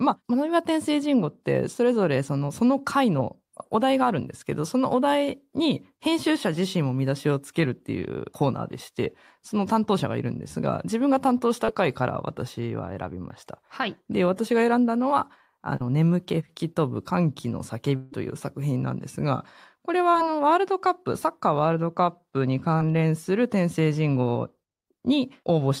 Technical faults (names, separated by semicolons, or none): short concealed packet loss; long network dropout